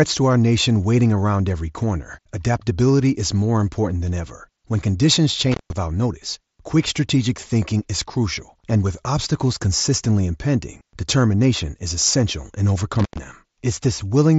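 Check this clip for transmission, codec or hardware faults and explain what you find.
Two dropouts from an intermittent contact stand out in this speech, heard over the band-limited, faintly grainy sound of a Bluetooth mSBC headset link that tops out at 8 kHz.

Intermittent contact: at 5.52 to 5.73 s the speech cuts out for about 160 ms, and again at 13.00 to 13.18 s for about 110 ms. A loose plug or cable briefly loses connection, so the signal stops, leaving only faint hiss, with crackle as the contact breaks and remakes. On a waveform, each gap is a near-flat stretch bounded by sharp spikes. On a spectrogram, it shows as a blank band framed by thin vertical broadband streaks.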